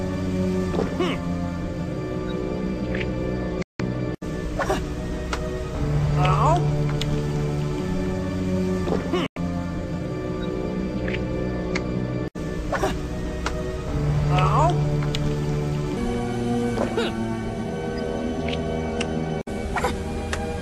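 At 3.62 s the audio cuts out for about 0.17 s, returning at 3.80 s. A second gap opens at 9.26 s and lasts about 0.1 s, ending at 9.37 s. Both are digital broadcast dropouts. The receiver lost valid frames and muted until good ones arrived. Each mute begins with a very fast fade of about 3 ms, so it sounds like a clean hole. The lengths suggest several lost frames each time. The material in those gaps is gone.

From 15.97 s to the end, the audio plays 1.29 times too fast. Pitch rises by roughly four semitones along with the speed, so everything sounds higher and more hurried. This is a section at the wrong speed. Speed and pitch shift together at one point and stay that way. The likely cause is that this part was played or edited against the wrong clock rate.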